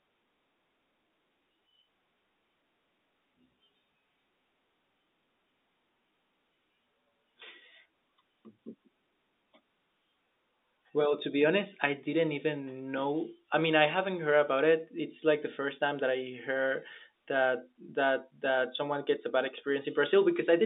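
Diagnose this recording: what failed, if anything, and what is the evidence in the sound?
Nothing failed here; the telephone path sounds normal.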